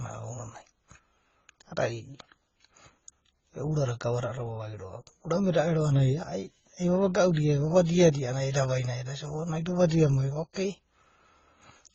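The speech in this clip was likely passed through a low-rate AAC-LC encode, near 16 kbit/s, and then re-encoded as Opus at around 32 kbit/s. This transcoding between lossy codecs leaves nothing above 7.4 kHz throughout, with both codecs' artefacts heard together.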